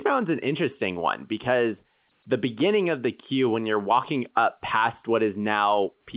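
No technical faults are audible.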